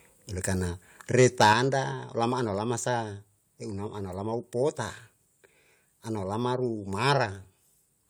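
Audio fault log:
1.18–1.53 s, microphone overload: the loudest syllables turn harsh and crackly, with flattened, gritty peaks. The likely cause is input gain set about 6 dB too high, so a small share of the waveform's tops were sliced off at the converter's ceiling, adding distortion.
1.53 s, 2.55 s, 7.5 s, microphone volume stepped down: the speech and its background drop abruptly in level, by about 6 dB right after the distorted stretch, then by about 1 dB twice more. This is likely automatic gain control reacting to the overload and lowering the input volume in single steps.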